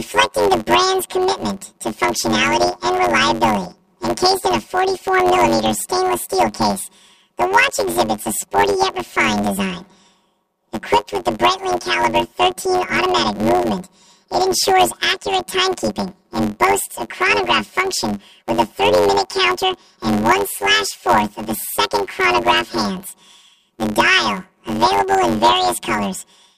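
From start to finish the whole clip has a rough, robotic buzz riding on it, which is the classic sign of planar audio read as interleaved. Each block stores all of one channel and then all of the other, but the reader treats it as alternating left-right pairs, so every block plays twice at double speed. The blocks here are short, about 10.67 ms, which fits a 512-sample block, so you get a buzz near 93.8 Hz rather than a clear octave jump.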